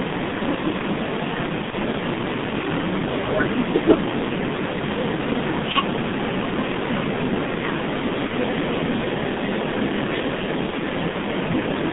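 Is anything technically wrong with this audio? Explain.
Yes. Throughout the clip, heavy G.723.1 codec damage: the speech is confined to roughly 150 Hz to 3.6 kHz and sounds muffled and hoarse with smeared consonants, which fits a low-rate coder around 6.3 kbit/s working in 30 ms frames with a slowly updated vocal model.

At 1.70, 5.72, 8.27 and 10.70 s, VoIP packet loss is concealed by the speech codec. Each gap is about 30 ms, consistent with one lost frame. The decoder extrapolates its last pitch and filter at falling gain, giving a brief, fading fill before the speech recovers.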